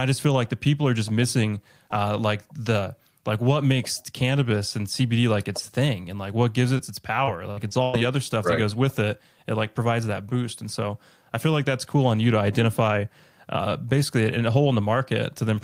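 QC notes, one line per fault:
6.77 to 6.81 s, short concealed packet loss: a brief smear just after "and like what gives", where about 20 ms of sound never arrived and was bridged by extending the preceding sound.
7.25 to 7.95 s, repeated packet loss (robotic sound): choppy stretch ending at "other stuff right that". Four dropouts, the longest 102 ms, were each patched by continuing earlier sound, covering 29% of the span.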